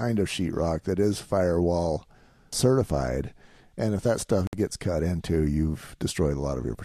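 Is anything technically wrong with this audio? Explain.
Yes. At 4.47 to 4.53 s the speech drops into a gap of about 59 ms, a gap at a join of encoded pieces: separately encoded segments were spliced untrimmed, leaving encoder start-up delay and end padding. The edges are smeared by the codec, and speech resumes where it stopped.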